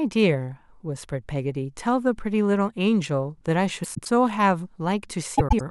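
At 3.83 to 4.08 s and again at 5.38 to 5.61 s, frames arrive out of order. Two adjacent blocks of roughly 105 ms, consistent with runs of four frames, play swapped, giving a garbled flutter. Unlike a dropout or repeat, no speech is lost or duplicated.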